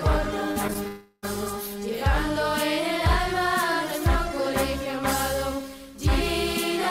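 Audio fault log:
0.51–0.79 s, repeated packet loss (robotic sound): five short gaps, the longest about 41 ms, leave roughly 80 ms missing across this stretch. Each hole is bridged by extending the preceding sound, so about 29% of the span is synthetic fill, giving a choppy texture.
0.87–1.25 s, long network dropout: roughly 360 ms of audio never plays. The gap is filled for about 351 ms by a stretched continuation of the last sound that decays rather than falling silent, likely from a network outage, and the audio resumes with that portion gone.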